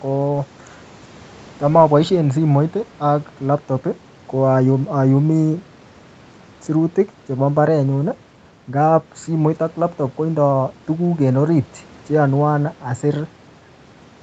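Nothing goes wrong anywhere in this speech; it just sounds like an ordinary call, with the top end stopping around 8 kHz as you'd expect from the call's microphone processing and an Opus link at 32 kbps.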